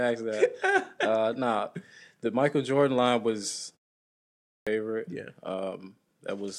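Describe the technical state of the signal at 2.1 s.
At 2.1 s the speech signal is intact, with no fault present at that moment.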